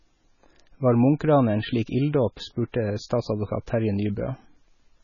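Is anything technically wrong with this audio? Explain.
Yes. The whole clip shows heavy damage typical of MP3 compression, which is the likely cause. The speech has nothing above 7 kHz, so the treble is cut at a fixed point and sounds dull. The encoder had very few bits to spend, which fits a bitrate around 16 kbps. It dropped weak frequency lines, and these flicker on and off between frames. That gives a watery, swirly texture, metallic chirps on s sounds, and smeared attacks.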